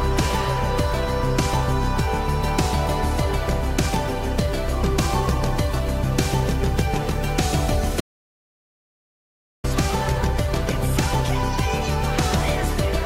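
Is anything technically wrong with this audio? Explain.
Yes. At 8.01 s the audio drops out to silence and returns at 9.64 s, about 1.6 s lost. The gap is silent with no room tone. The input was likely lost while recording continued, so the recorder wrote silence until it came back.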